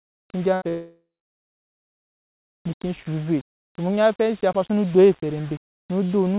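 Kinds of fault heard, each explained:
Low bit depth without dither: Throughout the speech a grainy distortion tracks the signal, and the quietest sounds turn rough or sputter. That likely comes from about 6-bit rounding with no dither, leaving error roughly 25 dB below the signal. On a spectrogram it shows as a broadband noise floor that rises and falls with the level, and on the waveform as visible stair-steps.
Burst of packet loss: From 0.54 to 0.63 s, about 80 ms of audio goes missing. The receiver fills it by stretching the last sound, so it turns into a held, fading buzz or hiss. A spectrogram shows the last sound smeared and decaying toward the gap's end, and the waveform shows it shrinking in amplitude.
Short concealed packet loss: Right after, from 0.63 to 0.67 s, a further 20 ms hole is patched with synthesised continuation, heard as a brief smear or wobble before real audio blends back. 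On a spectrogram it appears as a narrow blurred strip, and on the waveform as a short patched stretch.
Long network dropout: From 0.69 to 2.62 s nearly two seconds of speech never arrive. A fading buzz or hiss holds briefly, then about 1.6 s of silence follows before speech resumes further on, likely from the connection stalling. The spectrogram shows a blank block, and the waveform a flat line.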